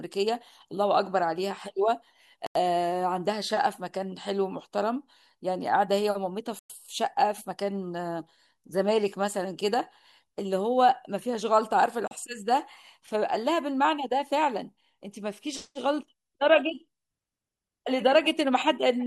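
A Bluetooth stall is the likely cause of three brief dropouts in this speech: delayed packets let the receiver's buffer run empty, so playback halted until retransmitted audio arrived. The sound cuts to silence from 2.46 to 2.55 s (89 ms), 6.59 to 6.70 s (106 ms) and 12.08 to 12.11 s (35 ms), each time stopping abruptly and then resuming, giving the speech a short stutter at each gap.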